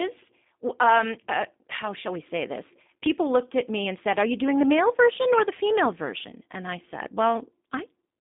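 Speech heard through a G.729 codec for the whole clip, its sound consistent with an 8 kbit/s voice link. Nothing passes above 3.7 kHz and the band runs roughly 200 Hz to 3.6 kHz, but unlike a plain telephone filter, the model-rebuilt voice sounds rough, buzzy and slightly synthetic.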